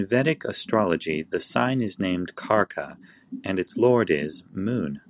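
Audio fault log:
No faults heard anywhere in this speech.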